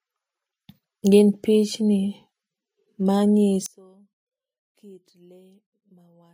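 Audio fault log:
3.66–6.34 s, one channel inverted: the sound likely had one stereo channel flipped in polarity, so when the two channels are summed to mono, everything they share cancels. The centred speech drops by about 29 dB, background included. What survives is only the small difference between left and right, which comes through as a faint copy of the speech. It persists from 3.66 s through to the end of the clip.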